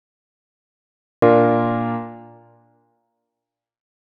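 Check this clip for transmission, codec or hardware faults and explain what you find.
There's one fault here, a cut-off start. The first 1.22 s is pure digital silence, and then the sound comes in abruptly at 1.22 s, already in progress, with no natural attack or fade-in. What's happened is that capture or the stream kicked in late, so whatever was sounding before that point never made it into the file, and playback jumps straight from nothing into the middle of it.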